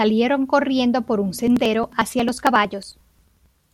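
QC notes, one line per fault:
1.39–3.64 s, periodic USB or driver dropouts. Starting just after "corriendo por un", the speech is broken by a regular train of ticks about every 0.09 s, some thirty in all. Each gap drops roughly 10 ms of audio outright, with no silence inserted. The waveform jumps across the missing piece, so every skip lands as a small click. The even spacing points to something stalling the USB bus or audio driver on a fixed schedule.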